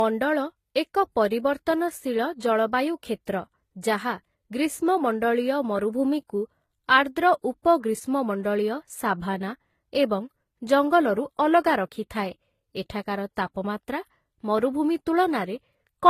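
Speech that was likely passed through more than one lossy codec, transcoding between lossy codecs, such as low-rate HE-AAC then Vorbis, leaves stacked artefacts from each codec heard together, with nothing above 14.9 kHz throughout.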